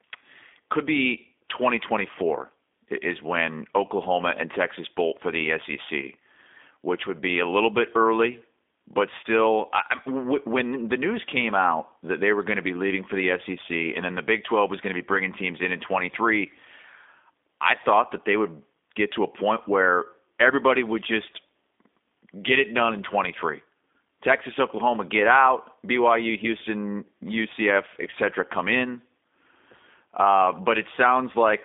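From start to finish the speech carries the signature of the G.729 codec. The sound is confined to a telephone band of roughly 250 Hz to 3.6 kHz, with nothing above 3.7 kHz. A plain band-limited line would only sound narrow and muffled. Here, the speech has the rough, slightly synthetic buzz of a rebuilt signal: a vocal tract filter, pitch predictor and sparse pulses, which fits an 8 kbit/s codec.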